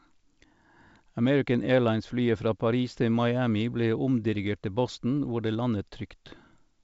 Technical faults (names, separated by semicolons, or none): none